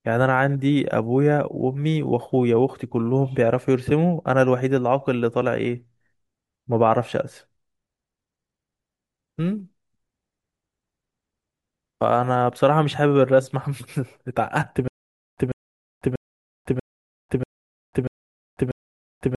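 From 14.88 s to the end, the playback likely stalled and kept retrying, replaying its last buffered fragment on each attempt before running dry: a stutter with silent gaps. In this speech clip a 140 ms burst comes back seven times at a steady period of about 639 ms, with roughly 498 ms of dead digital silence after each repeat. The speech that should have filled that final stretch never arrives.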